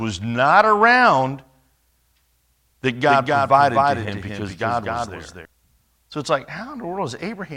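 Speech with a doubled audio track from 3.07 to 5.45 s: a full-band copy about 5 dB quieter trails roughly a third of a second behind, likely from a second, slower capture path. On a spectrogram every syllable repeats as a fainter, undecayed ghost, starting and stopping abruptly. Frames out of order appear between 4.05 and 4.10 s, where two short halves swap, which fits 20 ms frames. The result is a brief garbled flutter.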